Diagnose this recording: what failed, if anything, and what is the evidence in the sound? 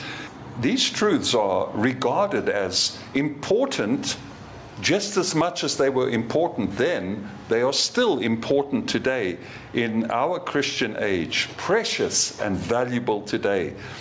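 Gain pumping runs throughout: a gain swing of around 15 dB, squashing levels together. The likely cause is input gain set far too high, with a fast limiter pulling down every peak.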